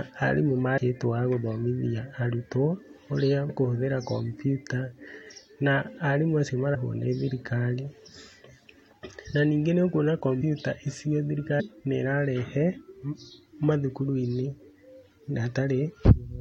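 Speech, with compressed frames skipped eight times: at 0.77, 3.49, 5.30, 6.74, 8.92, 10.40, 11.59 and 16.14 s. Each time the audio jumps forward. Between two and about ten whole frames of 23.2 ms are lost, so roughly 50 to 200 ms of sound disappears. The frames were missing or rejected as damaged by the decoder.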